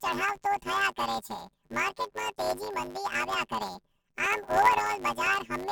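This speech clip carries a robotic buzz at 100 Hz from start to finish, with no clear octave shift. It is planar audio read as interleaved: each 10 ms block of left-then-right samples is taken as alternating pairs, so every block plays twice at double speed.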